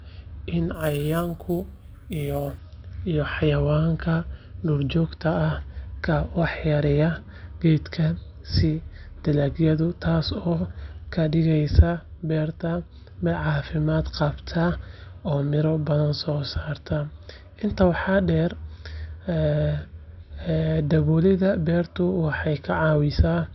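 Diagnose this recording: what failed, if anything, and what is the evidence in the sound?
Sample-rate conversion failed. From 0.74 to 2.58 s the speech gains a bright metallic fizz. This is imaging from sample-and-hold upsampling. Each sample was repeated without smoothing, which fits 12 kHz audio raised to 44.1 kHz. Mirror copies fill 6 to 12 kHz, about 23 dB down.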